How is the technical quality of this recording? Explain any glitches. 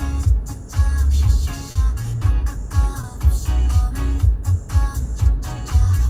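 Two brief dropouts mark the recording. Both are short concealed packet loss, at about 1.71 s and 3.01 s. In each, a stretch of audio failed to arrive in time for decoding, 40 ms at the first point and 20 ms at the second. The decoder covered each gap by extending the preceding sound and then crossfading back into the real signal. The result is a short smeared or wobbly moment, and a very brief sound falling inside the gap may simply disappear.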